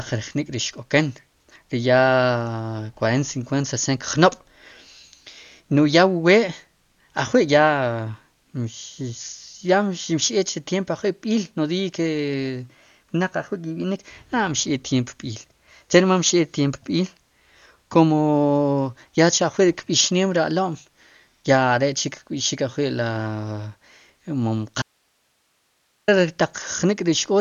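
From the start, the speech sounds dull and rough. Nothing reaches above about 6.9 kHz, so the top of the band is simply missing. The damage is heavy. This is likely Dolby Digital compression, at a bitrate that sounds as low as 48 kbps. At that rate the encoder narrows the band. It also leaves many frequency lines with no detail, so the decoder fills them with noise. That noise gives a grainy flutter around the voiced sounds.

At 24.82 s the speech drops out abruptly. It stays gone until 26.08 s, about 1.26 s in all. The gap is not silent. It holds only hiss, roughly 45 dB below the speech. This is an audio dropout to a faint residue. The signal was most likely lost upstream while the rest of the chain stayed live and kept passing its own noise. The cut is sharp at both ends, with no fade.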